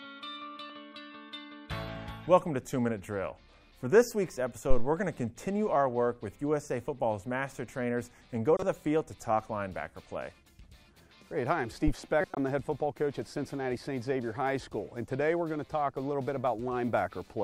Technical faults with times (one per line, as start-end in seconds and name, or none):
8.56-8.63 corrupt frame decoded
12.21-12.37 corrupt frame decoded